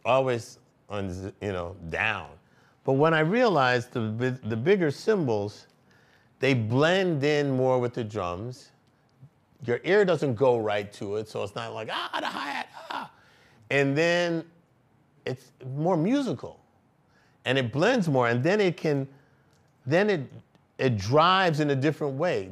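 No audible faults anywhere in the clip.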